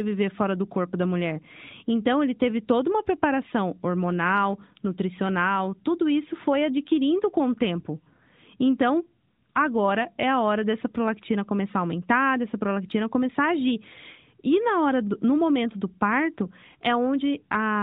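No technical faults occur at any point in the speech.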